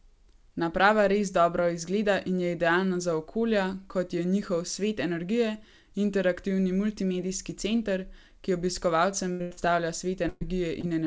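Throughout the clip the speech is carried over a WebRTC call path whose band stops at 8 kHz, which fits a G.722 codec. Beginning at 9.32 s, two bursts of packet loss arrive back to back, 9.32 to 9.41 s and 9.41 to 9.53 s. They remove about 80 ms and then 100 ms of audio. The receiver extends the last received sound across each hole and lets it decay, so the speech stretches into a held buzz or fading hiss before resuming later in the utterance.

Right after these, from 9.53 to 9.59 s, a short concealed packet loss covers about 40 ms. Here the decoder synthesises a continuation and blends it back into the real signal, which is heard as a brief smear.

A third burst of packet loss runs from 10.29 to 10.43 s. It drops about 120 ms and is bridged with concealment throughout, with no true silence. The result is a longer held, decaying sound, and the speech then picks up with that stretch missing.

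The last event is a second short concealed packet loss at 10.81 to 10.85 s, where about 20 ms is lost. It is audible as a quick smear or wobble.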